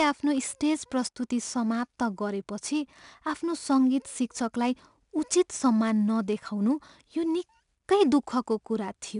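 Speech with 4-bit ADPCM compression throughout: a gritty hiss rides every loud syllable and attacks distort, consistent with roughly 89 kbps. A spectrogram shows a level-tracking noise floor and nothing above 10.6 kHz.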